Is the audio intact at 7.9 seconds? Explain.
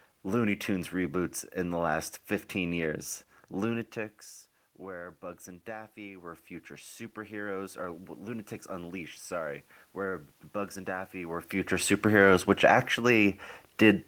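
No. At 7.9 seconds the sound sits inside a stretch of automatic gain rising that runs from 4.78 to 11.48 s. Shortly before, the voice dropped by about 15 dB as the talker moved away, and the gain control answered by slowly raising its gain by about 9 dB. What distinguishes this from the talker simply moving is that the room noise swells along with the voice, gradually over several seconds, rather than the voice alone changing level.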